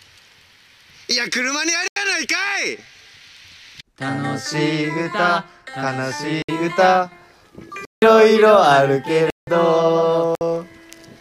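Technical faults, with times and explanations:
1.88–1.96 s, 6.42–6.49 s, 7.85–8.02 s, 9.30–9.47 s and 10.35–10.41 s: block of digital silence. The sound cuts abruptly to dead silence and returns with no fade. The 59 to 85 ms gaps are heard as short holes, and the two 171 ms gaps as longer holes. The output buffer was likely not filled in time, so zeros were played instead. The 85 ms and 171 ms lengths fit whole buffers of 4096 and 8192 samples.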